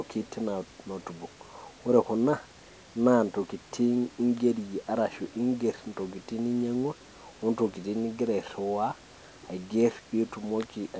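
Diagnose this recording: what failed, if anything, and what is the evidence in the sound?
Nothing in the recording points to a failure at any stage, from the analogue side through codec, network and playback. The speech has passed through a call path whose band limit, with nothing above 8 kHz, fits G.722 at 64 kbps, and the room noise behind it sits about 29 dB below the speech.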